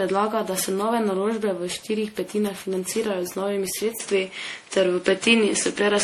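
The whole speech clip is swirly and hollow with smeared attacks and nothing above 17 kHz, likely generation loss from something like ten passes through MP3 at around 64 kbit/s. Then at 3.98 s, right after "z novimi", there's a 20 ms gap and the sound turns duller, capped near 10.5 kHz and about 5 dB different in level, likely the input switching to a poorer device.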